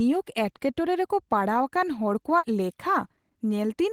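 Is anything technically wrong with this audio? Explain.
Yes. At 2.38 s, running to about 2.44 s, the speech has a burst of packet loss: roughly 50 ms of audio never arrived, so the receiver stretched and faded the last sound into a brief buzz or hiss before jumping ahead. Unlike a plain dropout, the gap is filled rather than silent, and material is skipped.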